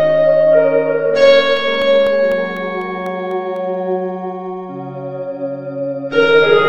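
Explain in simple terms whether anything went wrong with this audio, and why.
Between 1.57 and 3.56 seconds the music picks up a steady ticking, once every 0.25 seconds, about ten ticks in all. These are periodic USB or driver dropouts: something briefly stalled the audio connection on a regular schedule, leaving tiny gaps of silence, each about half a millisecond.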